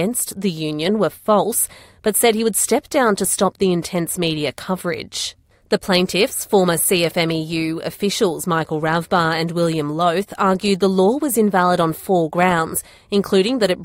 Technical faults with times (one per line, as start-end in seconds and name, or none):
none